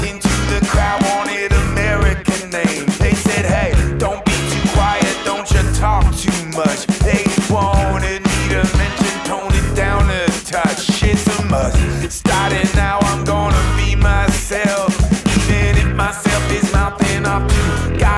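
No technical faults can be heard anywhere in the audio.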